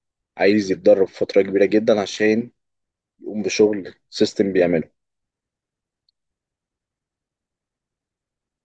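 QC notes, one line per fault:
No faults to note in the QC check of this speech clip.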